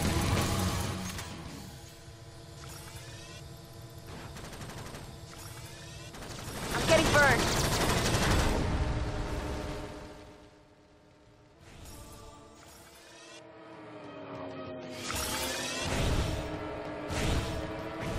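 From 6.49 to 6.91 s there is zipper noise. The level shifts by around 15 dB in unsmoothed 1 dB jumps, roughly twenty a second. Each jump clicks. Together the clicks make a fast ticking over the sound while the level moves.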